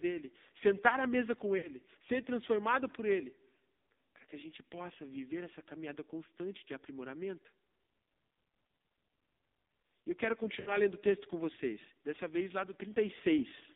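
AMR narrowband mobile codec, throughout: the sound is confined to roughly 200 Hz to 3.7 kHz, with a heavily buzzy, synthetic texture that points to a low rate near 5.9 kbps.

Lost AMR speech frames, 1.58 to 1.70 s, between "sentar à mesa com" and "ser transformado por": the decoder repeated its last pitch and vocal tract settings at falling gain, so the sound smears and fades. This fits about three missing 20 ms frames.

Lost AMR speech frames, 10.60 to 10.80 s, between "eu quero" and "o texto com vocês": the same concealment stretches and dims the sound before it returns briefly weak and rough.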